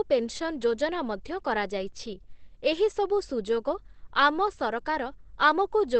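A speech clip that is muffled and hoarse throughout, with nothing above 8 kHz, likely Opus compression in its SILK speech mode at a low rate near 12 kbps; a spectrogram shows a flat ceiling at that cutoff.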